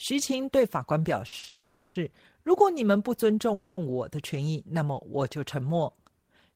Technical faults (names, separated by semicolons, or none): short stall from a late packet; call audio freeze